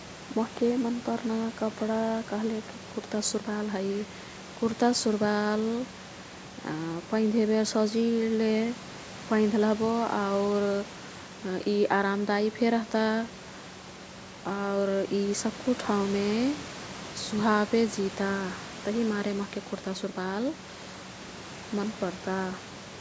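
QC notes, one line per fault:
No fault found, so there is no line per fault to give for this clip.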